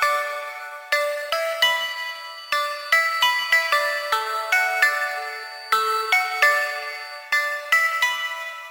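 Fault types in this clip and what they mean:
Feedback whistle: a thin, steady tone at 4.6 kHz sits roughly 20 dB below the main sound from 1.74 s to 7.31 s, swelling and fading slowly in level, likely from a loudspeaker-to-microphone loop held just at the edge of feedback so that one frequency rings without growing. On a spectrogram it appears as a narrow horizontal line at 4.6 kHz across that span. On the waveform it is faint, at most a fine fuzz on the trace.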